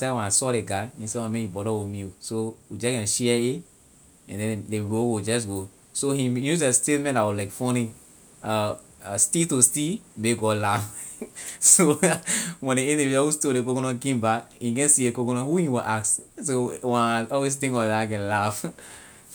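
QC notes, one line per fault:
No faults heard in this speech recording.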